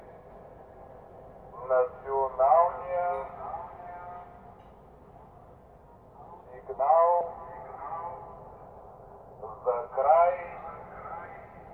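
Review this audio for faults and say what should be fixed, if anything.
No faults found; nothing needs fixing.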